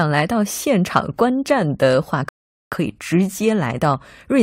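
At 2.29 s the speech halts in a rebuffering stall: the player exhausted its downloaded audio and waited for more, leaving silence until 2.72 s, then picking up exactly where it stopped. Nothing is skipped, but about 430 ms is added, heard as an abrupt gap. A waveform shows a flat line between those times; a spectrogram shows a clean vertical band of empty columns with matching content on either side.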